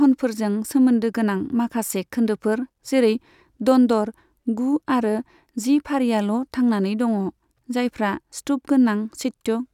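A short speech recording, with no technical faults to report. Nothing in it needs a timestamp or a cause.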